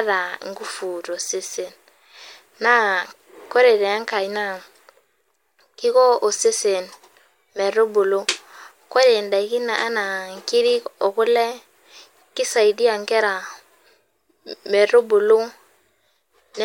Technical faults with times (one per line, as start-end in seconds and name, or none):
7.88-9.38 sample clock jitter